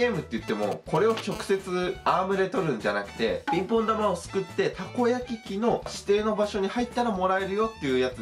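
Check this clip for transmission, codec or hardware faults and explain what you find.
Two bits of mobile-phone interference turn up early on, one right after the other, both from a 2G handset sitting close to the gear.

From 0.48 to 1.21 s there are GSM signalling bursts, a galloping dit-dit-dit of short buzzes. The phone is only sending brief groups of radio bursts, the kind it sends while it talks to the network, and the audio circuit rectifies them into short 217 Hz buzzes. It sits roughly 10 dB under the signal.

From 1.32 to 2.20 s it turns into steady GSM phone buzz, which sounds like the phone is now in a call. It's transmitting in bursts 217 times a second, and the audio path demodulates those pulses into a hard, raspy 217 Hz buzz with lots of harmonics. The buzz has nothing to do with the programme audio and sits about 20 dB below it.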